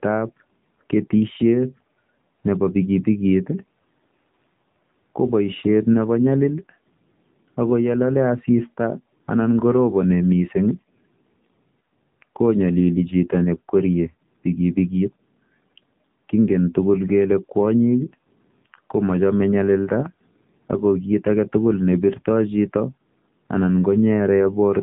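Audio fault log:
Throughout, AMR narrowband mobile codec: the speech sounds muffled and boxy, with a buzzy, somewhat synthetic edge on every syllable and nothing heard above about 3.8 kHz, so sibilants lose their hiss. The voice has been rebuilt from a vocal-tract model excited by sparse pulses in short subframes, at an 8 kHz sampling rate that cannot carry the upper band. The plainly audible coarseness fits a low AMR-NB mode of around 7.4 kbps.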